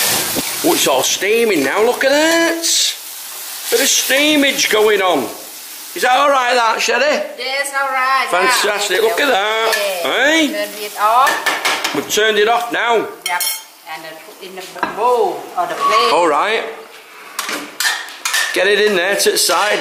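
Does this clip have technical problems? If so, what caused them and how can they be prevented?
Yes: damaged data in a compressed stream at 11.84–11.86 s and 14.75 s. Corrupted frames throw the decoder out of sync, leaving brief vertical glitches or gaps on spectrogram and waveform. Checksum-verified transfers and error-protected storage prevent this.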